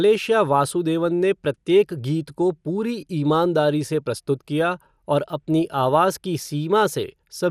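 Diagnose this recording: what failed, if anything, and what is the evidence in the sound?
Codec stage: the speech sounds dull and gurgling throughout, with nothing above 15 kHz, likely MP2 compression starving and dropping upper sub-bands, consistent with about 80 kbps.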